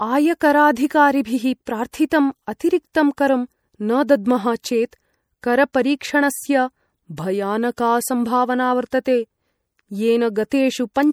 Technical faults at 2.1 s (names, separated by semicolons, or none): MP3 compression; pre-echo